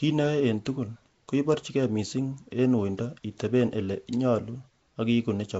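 From the first moment to the last, the speech carries a rough, hissy halo and a smeared, underwater quality, and nothing comes through above 7.7 kHz. That points to Nellymoser compression, most likely the old Flash microphone codec at a rate around 32 kbps. It spends a fixed two bits per sample on short blocks, so quiet bands get no bits and are patched with noise. That patching is what gives the plainly audible grit and blur.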